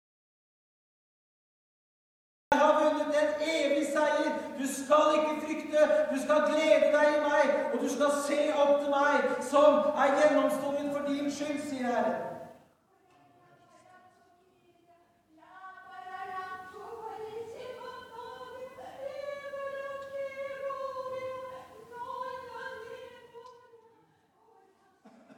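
An audio dropout to silence runs from the very start to 2.52 s: the clip opens in complete silence, with no room tone, before the sound cuts in mid-flow, most likely because the input was lost and the recorder kept writing silence. Zipper noise follows from 22.94 to 23.78 s, where a fade of roughly 15 dB is applied in 2 dB steps, about ten per second, with no smoothing, so each jump leaves a small click and a ticking rides on the sound.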